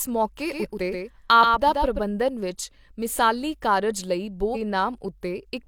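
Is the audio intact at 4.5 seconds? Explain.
No. From 4.51 to 4.57 s the speech is broken by damaged data in the compressed stream: the decoder misreads corrupt frames and loses sync until it finds the next valid frame. The result is a brief chirp or squawk.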